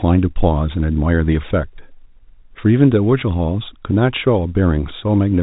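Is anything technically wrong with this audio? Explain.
No, nothing is technically wrong with this audio.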